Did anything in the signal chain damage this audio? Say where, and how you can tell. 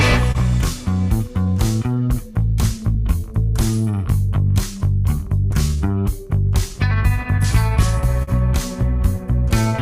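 Yes. Clock drift between sender and receiver at the network jitter buffer: the sender's clock runs roughly 2% slow, so the buffer keeps draining throughout.

Repeated timing corrections from 0.12 to 6.74 s: the receiver repeats short pieces, playing at 98% speed and adding around a tenth of a second.

Two short stalls from late packets, at 0.32 and 8.23 s: the buffer ran empty, and the last sound was held for 30 ms and 44 ms before resuming without loss.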